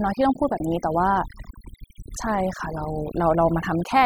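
Overdone noise removal runs through the whole speech recording. The noise reduction was set too aggressively, pulling individual frequency bands down or shutting them whenever they sat near the estimated noise floor. Quiet speech detail disappears with them, leaving near-silent gaps dotted with twinkling artefacts.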